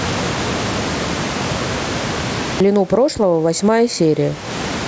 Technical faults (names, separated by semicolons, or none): gain pumping; clipped start after a pause